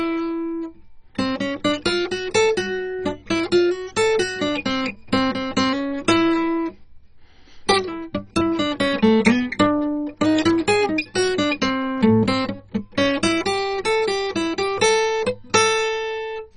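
Throughout the music, a very low-rate encode, likely MP2 compression at a bitrate near 32 kbps, has starved the sub-bands of bits. Nothing survives above 10.3 kHz, so the sound is dull, and the remaining bands flicker with a heavy, gurgling, granular distortion.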